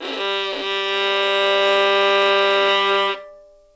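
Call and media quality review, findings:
No faults found in this clip of everyday sounds. The call path is audible as a hard band limit, with nothing above 8 kHz, consistent with wideband G.722 coding at 64 kbps.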